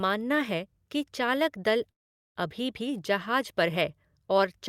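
Speech with a call audio freeze from 1.91 to 2.39 s: the sound drops to near silence for about 0.44 s, likely from packets stalling and the jitter buffer running dry, then resumes where it stopped.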